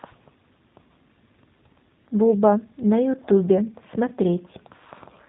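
Speech, G.729 codec throughout: rough, synthetic timbre consistent with 8 kbit/s G.729A, and a spectrogram shows an empty band above a hard ceiling near 3.8 kHz.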